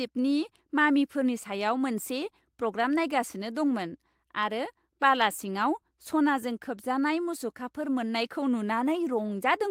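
A speech recording with no audible technical faults.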